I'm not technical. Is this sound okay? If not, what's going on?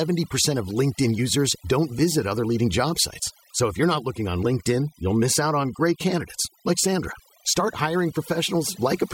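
No. This speech has overdone noise removal throughout. A noise reduction tool was pushed too hard on a noisy recording, so whenever part of the sound came close to what it judged to be noise, it turned that part almost off. The background drops and breaks up into small twinkling specks, and the quieter parts of the voice get stripped away too.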